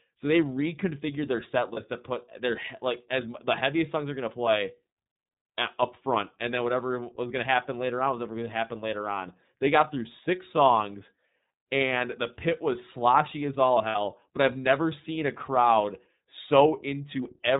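Throughout, the speech carries the iLBC codec's plainly audible damage: a narrowband sound with nothing above 4 kHz, and a rough, slightly synthetic texture from frame-by-frame excitation coding. The character fits iLBC's 13.33 kbps mode with 30 ms frames.

Lost iLBC frames first occur at 1.73 to 1.78 s, right after "they reconfigured their set", which fits one missing 30 ms frame. The decoder fills the gap by repeating the last pitch cycle mixed with noise, so it sounds like a brief held, faintly buzzy vowel. At 13.89 to 13.96 s, between "was sloshy as all" and "but I've never seen", a longer concealment fits two lost frames, about 60 ms. Because iLBC frames decode independently, the voice recovers almost immediately after each gap.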